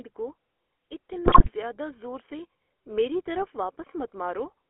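GSM full-rate codec coloration runs through the entire speech clip. The voice has a buzzy, gravelly roughness and is confined to a telephone band of roughly 300 Hz to 3.4 kHz. This codec models the vocal tract and excites it with a sparse, regularly spaced pulse train, so the finer detail of the voice is lost and replaced by that characteristic grit, which fits the 13 kbps full-rate coder. GSM bit errors strike from 1.26 to 1.51 s, just before "زیادہ زور سے میری". There the voice breaks into squawks, pops and gargling. Flipped bits on a weak radio link corrupted the decoder's filter, pitch and gain parameters, warping the spectrum and throwing the level around frame by frame. The length of the burst points to roughly a dozen damaged frames.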